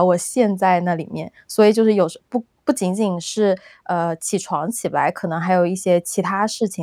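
No technical faults can be heard in this speech clip.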